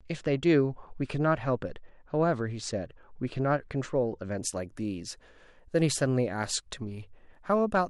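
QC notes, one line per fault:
0.0–4.38 s: channel delay (comb filtering). One channel lags by a couple of samples, about 0.05 ms, so the mono sum cancels around 10 kHz, leaving the speech dull. A spectrogram shows a fixed dark horizontal notch band there, ending at 4.38 s.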